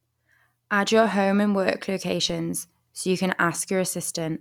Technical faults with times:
2.29 DC step

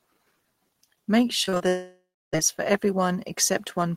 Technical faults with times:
1.45-1.62 repeated packet loss (robotic sound)
1.68-2.34 long network dropout

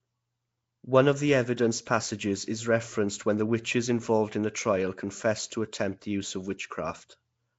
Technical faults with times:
0.00-7.59 Nellymoser compression

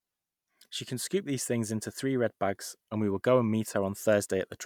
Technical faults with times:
none

